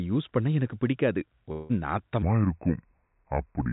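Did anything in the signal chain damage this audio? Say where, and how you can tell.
Yes. A long network dropout runs from 1.52 to 1.71 s. About 180 ms of audio is missing, and the receiver papers over nearly all of it with a fading, buzzy continuation of the last sound rather than silence. That points to likely packet loss on the network leg.

A section at the wrong speed starts at 2.22 s and runs to the end. The speech plays at about 0.69 times its proper rate, so it drags and drops roughly seven semitones. This is likely a playback or resampling stage running on the wrong clock.

Through both faults, the call path's G.711 A-law coding holds everything below 4 kHz, as expected for that codec.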